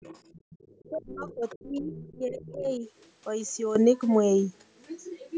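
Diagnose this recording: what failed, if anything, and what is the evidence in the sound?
A faint second voice runs under the speech from 0.01 to 1.64 s, again from 1.83 to 2.16 s and from 2.38 to 2.61 s, roughly 20 to 25 dB below the talker. This is the other side's voice leaking through, likely because the echo canceller at the call-processing stage left residual loudspeaker echo in the microphone signal.

The talker's speech dips abruptly at 0.39 to 0.45 s (a deep drop, around 35 dB), across 0.89 to 1.95 s (around 25 dB) and at 2.11 to 2.83 s (around 20 dB). This is speech suppressed in double talk, likely the echo canceller turning down near-end speech while the far side was active.

From 3.76 s to the end, speech and background noise step up together by about 12 dB in a single instant, with no ramp. This is a sudden gain jump, likely a digital gain setting applied without smoothing at the driver or buffer stage.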